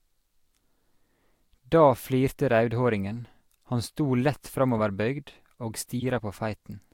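At 4.78–4.80 s and again at 6.00–6.03 s, a corrupt frame decoded: damaged bits in about two and then three frames put energy at wrong frequencies, giving brief chirps, squeaks, blips or bursts of noise.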